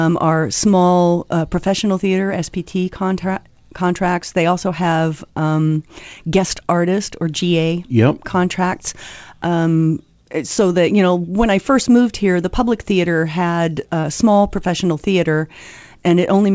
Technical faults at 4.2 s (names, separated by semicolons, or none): none